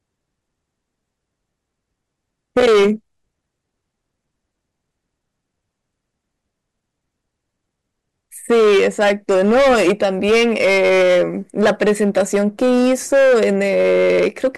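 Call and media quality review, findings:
Hard clipping, 2.57–2.90 s, 8.50–11.23 s, 11.60–14.48 s. Speech peaks overdriven about 10–14 dB past a gain stage or converter ceiling, tops cut flat, harsh fuzz on loud syllables.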